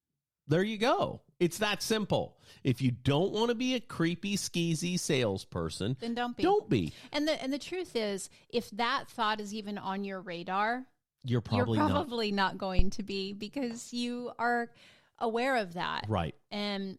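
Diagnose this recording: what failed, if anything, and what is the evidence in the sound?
A phantom power thump in the analogue input stage: a deep low-frequency thump at 12.79 s, peaking around -10 dBFS and decaying within about 42 ms, gone by 12.98 s. The supply was switched on or off on a live input, and the voltage step coupled through the capacitors.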